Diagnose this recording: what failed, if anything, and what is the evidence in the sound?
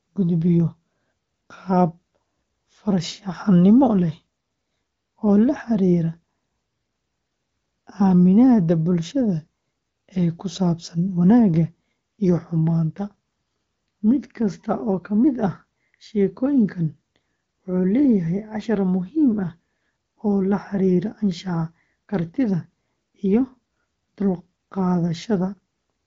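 Nothing failed in this recording.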